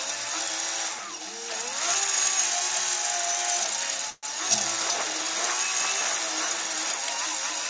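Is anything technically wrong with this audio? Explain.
Yes. From 4.10 to 4.25 s there is a call audio freeze: the last sound stretches into a fading buzz for about 128 ms, then about 20 ms of silence, and the audio resumes where it stopped, 128 ms late, with nothing missing. The likely cause is delayed packets draining the jitter buffer on this G.722 call path, which carries nothing above 8 kHz.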